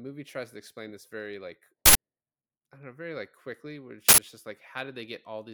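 Speech with two uninitialised-buffer hits at 1.86 s and 4.09 s: each a loud 93 ms burst of digital junk, which fits an unwritten 4096-sample block being played.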